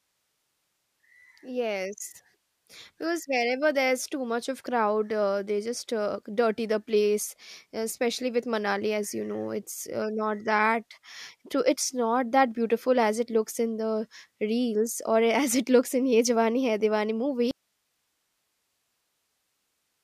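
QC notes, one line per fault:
17.51 s to the end: audio dropout to a faint residue. The speech cuts out abruptly mid-flow and never comes back, leaving nothing but a bed of hiss sitting roughly 50 dB below the normal level. That hard edge, with no fade or natural pause, plus live noise rather than digital silence, suggests the signal was most likely lost upstream while the rest of the chain kept running and passing its own noise floor.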